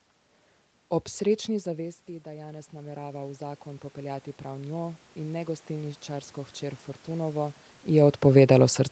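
Speech, and from about 1.47 s the level drops off, roughly 17 dB, as the talker seems to move away. Then automatic gain rising kicks in: the AGC slowly pulls in about 13 dB until 6.9 s, so voice and room noise swell together.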